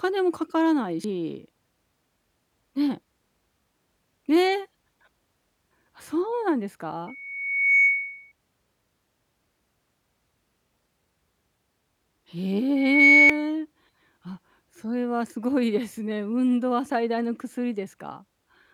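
Damaged data in a compressed stream appears at 1.04 to 1.07 s, a brief blip: corrupted bytes make the decoder misread or reject the frames there, lose sync and hunt for the next valid frame header. A loudspeaker feedback squeal follows at 7.07 to 8.32 s. The microphone picks up its own loudspeaker, and at 2.2 kHz the loop gain exceeds one, so that tone swells over most of a second to around 10 dB above the speech. It returns at 12.76 to 13.51 s, building faster this time, within a fraction of a second. Inside that squeal, at 13.30 s, a second short corruption blip interrupts the decoded audio.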